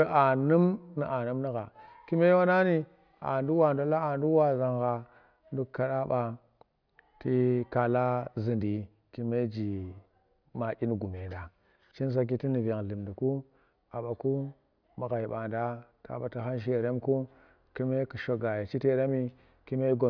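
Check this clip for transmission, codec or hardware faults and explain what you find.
Nothing in this speech recording points to a problem with how it was sent, encoded or captured, so there's nothing here to flag.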